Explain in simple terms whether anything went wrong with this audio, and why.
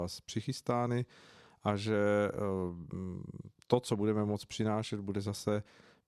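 Listening closely to this speech recording, nothing stood out as having gone wrong.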